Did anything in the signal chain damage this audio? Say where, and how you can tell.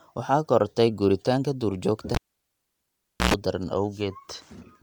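Yes. Throughout the clip there is plainly audible codec damage consistent with Bluetooth LC3 compression. The speech has a breathy, grainy edge, and the upper spectrum sounds partly noise-filled rather than detailed, even though content still reaches about 20.1 kHz. That is the signature of a transform codec that discards fine high-band detail and substitutes shaped noise. The graininess fits 10 ms LC3 frames at roughly 48 kbps, so this is likely the codec stage of a Bluetooth LE Audio link.

In the analogue wiring, a cable was pulled and plugged in from 2.15 s to 3.34 s. A pop marks the disconnect, followed by near silence for about 1.14 s. Then comes a short burst of 60 Hz mains buzz, about 0.11 s long, while only the plug tip makes contact and the unshielded conductor picks up hum. A second pop follows as the full connection restores the signal.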